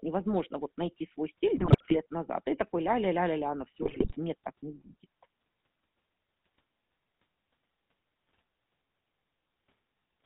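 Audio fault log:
Throughout: GSM full-rate codec. The sound has that gravelly, buzzy roughness and nothing above 4 kHz, which fits the 13 kbps full-rate coder. It rebuilds speech from a vocal-tract model driven by a sparse pulse train, keeping only a third of the excitation.
1.54–2.06 s and 3.82–4.17 s: GSM bit errors. The first burst comes right after "невозможно вот найти свой" and clears before "назад и такой ля". The second follows "ля ля ля на". Corrupted filter, pitch and gain values reach the decoder frame by frame, so the spectrum warps and the level jumps into squawks, pops and gargling.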